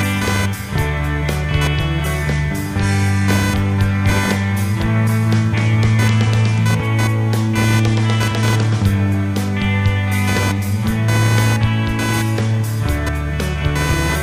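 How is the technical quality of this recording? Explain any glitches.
The quality is let down by one problem that runs the whole way through. Computer activity noise sits under the entire clip: a buzzy, chirping pulse train at roughly 500 Hz, only around 10 dB below the sound itself. It comes from processor or graphics load shifting the shared ground the audio circuit uses, so it tracks the machine's activity rather than anything in the audio.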